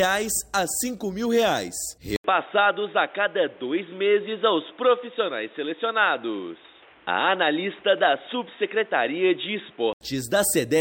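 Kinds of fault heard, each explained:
Input switched to a poorer device: At 2.16 s the audio drops out for 80 ms. It returns dull and boxy, with nothing above 3.8 kHz. New background noise sits roughly 30 dB below it. Level holds steady. A change of input device is the likely cause, until 10.01 s.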